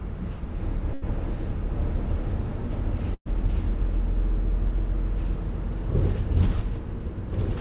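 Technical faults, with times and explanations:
0.94–1.04 s and 3.14–3.27 s, burst of packet loss: consecutive packets went missing, so the receiver stretched and faded the last sound (the longer gap reaching silence) before skipping ahead.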